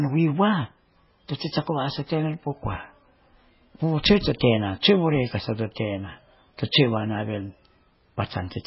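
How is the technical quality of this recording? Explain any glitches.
The recording has heavy damage throughout, most likely from MP3 compression. Nothing reaches above 5.6 kHz, and the speech sounds watery and swirly because weak frequency lines flicker on and off between frames, consistent with a very low bitrate of around 16 kbps. A plain low-pass filter would dull the sound without that warbling.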